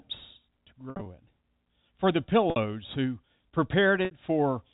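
Packet loss with pitch repetition hits this speech at 0.90 to 1.06 s, where about 110 ms goes missing in scattered bursts, and at 2.50 to 2.56 s and 4.05 to 4.11 s, each a 60 ms gap. In each gap the receiver loops the last pitch period, so the sound briefly holds with a buzzy tone across the G.711 telephone band.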